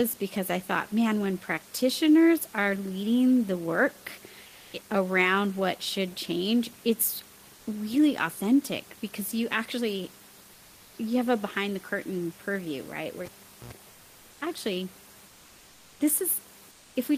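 Comfort noise in place of the background appears first from 4.47 to 4.73 s, between "are leading the work" and "around what should change", and again from 10.53 to 10.97 s, between "authentic because you actually" and "you have a behind". In each gap the room noise, sitting about 29 dB below the loudest speech, gives way to a smooth, textureless hiss. This is likely Opus discontinuous transmission: the sender stops sending during pauses and the receiver synthesises a stand-in.

A cable pulled and plugged in follows at 13.25 to 13.73 s, right after "curtain purview right where". A pop cuts the signal and near silence holds for about 0.43 s. A short burst of 60 Hz mains buzz, lasting about 90 ms, comes while the plug only half connects, and a second pop marks the signal returning.

The comfort noise recurs from 13.91 to 14.41 s, from 15.27 to 15.99 s and from 16.71 to 16.95 s. In each stretch the real background detail flattens into the same steady synthetic wash. 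These later patches also drop in level, by about 1, 2 and 3 dB respectively, while the first patch sits about 1 dB above the background.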